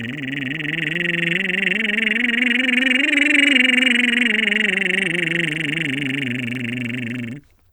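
From 4.55 s to 7.55 s, something in the system stalls the USB link or audio driver once a second, causing periodic USB or driver dropouts. Each stall loses a tiny fraction of a millisecond of the music, and the gap is filled with silence. The result is about four small, evenly spaced ticks, one per second, heard over the music because the waveform drops to silence and back.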